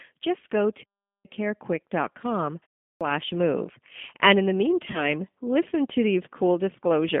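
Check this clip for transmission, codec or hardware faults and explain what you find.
Three faults are audible in this speech: codec coloration throughout, one clipped onset, and one concealed packet loss.

G.729 codec, throughout: This 8 kbit/s codec resynthesises speech from a vocal tract filter, a pitch predictor and a few pulses per subframe, so the voice sounds rough and faintly synthetic. The line band runs about 200 Hz to 3.5 kHz, with nothing brighter.

Clipped start after a pause, 2.90 to 3.01 s: After a 0.32 s pause, the output device had gone idle and needed time to wake, so about 107 ms at the start of the next phrase is swallowed. The sound begins abruptly out of silence, missing its first sounds.

VoIP packet loss concealed by the speech codec, 4.91 to 5.10 s: Just after "in the", about 30 ms of audio was lost, which fits a single dropped packet. The decoder filled the gap by extending its last pitch and filter with falling gain, stretching the sound into a fading buzzy tone or coloured noise. 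Because each frame depends on the one before, the voice stays weak or distorted for a short while afterwards, before "listen to".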